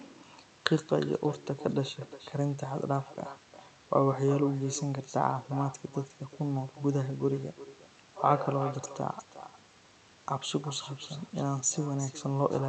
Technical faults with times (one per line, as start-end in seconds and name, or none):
0.00-12.69 echo with no canceller